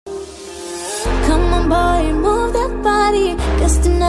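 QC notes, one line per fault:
Nothing to flag on this one; no faults turned up anywhere in the clip.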